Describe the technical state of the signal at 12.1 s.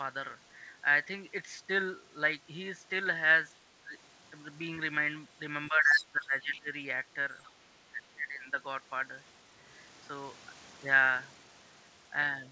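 At 12.1 s the speech is intact, with no dropout, glitch or distortion, only the band limit of the call path, whose content stops at 8 kHz as fits a G.722 wideband codec.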